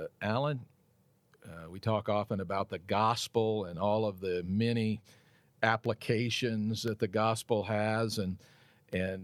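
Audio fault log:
5.86–8.93 s, periodic USB or driver dropouts: about four sharp ticks land in the speech at an even spacing of 1.024 s, each audible only because signal is present to be interrupted. Something in the system is briefly stalling the USB bus or audio driver on a fixed timer, and at each stall a sliver of audio, well under a millisecond, goes missing and is replaced by silence. That tiny gap in the waveform is what clicks.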